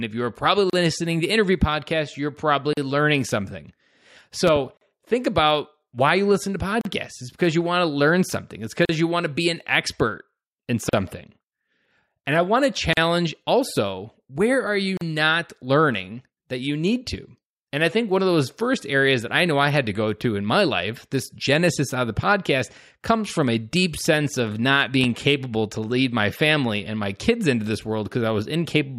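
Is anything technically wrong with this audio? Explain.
Yes, there are two kinds of fault in this speech clip.

Gaps at joins of encoded pieces occur at 0.70, 2.73, 4.77, 6.81, 8.85, 10.89, 12.93 and 14.97 s, about every 2 s. Separately encoded segments were joined with each encoder's start-up delay and final-frame padding left in. The result is brief silences of 34 ms at first and 40 ms afterwards, with smeared edges before the speech resumes where it left off.

Loud pops occur as a double pop at 4.47 to 4.59 s and a single pop at 25.04 to 25.06 s. A sudden voltage step or pulse, likely from a plug, switch, static discharge or driver glitch, was added to the signal. Each is a sharp pop roughly 10 dB above the speech, which continues underneath.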